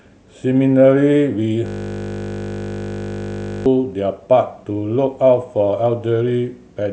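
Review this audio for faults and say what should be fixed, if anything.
From 1.66 s to 3.66 s the speech gives way to a steady buzz. This is a system hang loop. The computer or its audio driver stalled, but the sound hardware kept replaying the same ring buffer. A 20 ms slice of audio repeats exactly, about a hundred times. Because the loop is so short, it fuses into a 50 Hz tone rather than a stutter. That points to a 20 ms playback buffer. Keep the audio thread from stalling, and have the driver output silence when no new data arrives in time.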